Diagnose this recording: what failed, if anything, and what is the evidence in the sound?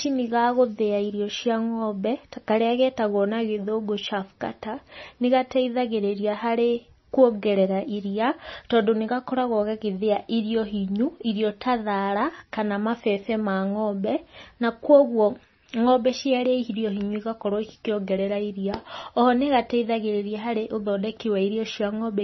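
Codec stage: heavy MP3 compression, likely at a low bitrate around 24 kbps. Speech ends sharply near 5.9 kHz throughout, with watery swirling as starved frequency lines flicker between frames.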